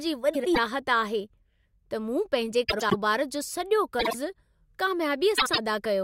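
Frames out of order garble the speech at 0.33 to 0.58 s, 2.68 to 2.94 s, 3.99 to 4.14 s and 5.37 to 5.58 s. Two adjacent blocks, about 50 to 105 ms each, play swapped. Each stretch flutters. No time is lost.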